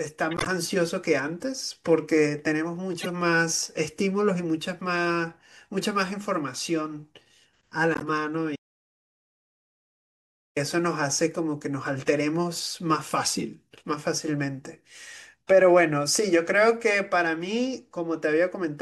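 At 0.31–0.48 s, 3.00–3.08 s and 7.94–8.10 s, corrupt frames were decoded. Damaged compressed data was played as if valid, producing short squeaky bursts peaking at about -10 to -15 dBFS. On a spectrogram these show as brief, blocky smears of misplaced energy.

From 8.56 to 10.56 s, a 2.0 s audio dropout to silence cuts the speech off and then resumes it mid-flow, likely from a lost input while recording continued. The waveform goes completely flat, and the spectrogram shows a blank band with no room tone.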